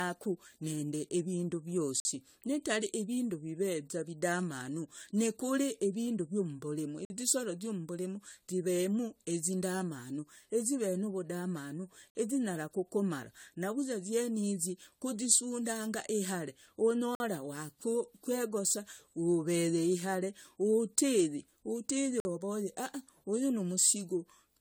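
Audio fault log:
Throughout: generation loss. The speech sounds swirly and hollow, with smeared consonants and soft, blurred attacks. The damage is heavier than a single lossy pass would leave. It is likely the result of repeated decoding and re-encoding, around seven passes, with a codec that points to AAC-LC at a rate that fits 96 kbit/s. Each pass quantises on a shifted frame grid. Noise and spectral holes pile up, with nothing above 20 kHz.
2.0 s to 2.05 s, 7.05 s to 7.1 s, 12.1 s to 12.15 s, 17.15 s to 17.2 s, 22.2 s to 22.25 s: gap between chunks. Each hole is a 50 ms silence. The holes recur every five seconds or so, at the joins between 5.0 s chunks. No speech is lost. The flow is simply cut at each join. The regular spacing gives away the chunked delivery.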